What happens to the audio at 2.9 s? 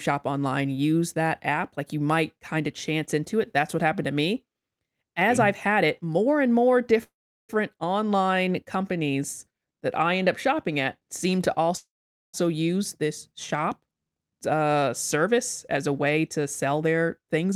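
Nothing goes wrong at 2.9 s; the speech carries on intact through that moment, with no dropout, click or distortion.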